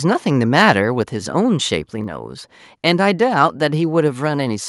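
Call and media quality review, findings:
Harsh crackle on loudest syllables, 0.58 to 0.71 s. Peaks flattened, around one percent of samples clipped, tops about 3 dB past the converter's limit. Likely microphone overload: input gain set too high, driving the converter into its ceiling.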